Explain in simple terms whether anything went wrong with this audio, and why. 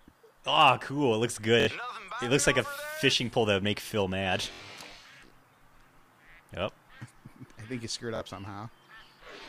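Something did go wrong: a Bluetooth stutter, heard three times, at about 1.60 to 1.67 s, 4.53 to 4.61 s, and 8.16 to 8.21 s. Each time the wireless link briefly lost data, about 70 ms in the first two and about 46 ms in the last, and the receiver filled the gap by repeating its last bit of sound, giving a quick buzzing stutter. Unlike a plain dropout, the gap isn't silent. And when the sound returns, it has skipped ahead rather than picking up where it stopped.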